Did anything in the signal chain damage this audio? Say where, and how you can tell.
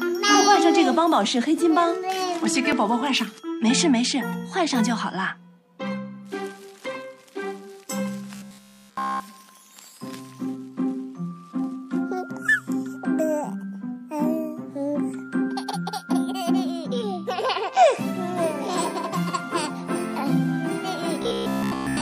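Yes, robotic sound from repeated short buffers at 8.36–9.20 s and 21.22–22.00 s: a rigid 66.7 Hz buzz, likely a starved buffer looping 15 ms chunks.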